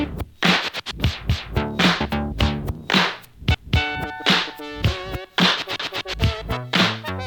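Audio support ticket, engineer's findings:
Overlapping chunks: stutter at 1.30–1.55 s, 3.55–3.80 s, 5.80–6.05 s. A 250 ms slice replays at each join of 2 s chunks in the chunking/streaming stage. The waveform shows identical repeated segments, and the spectrogram shows duplicated blocks with a hard vertical seam.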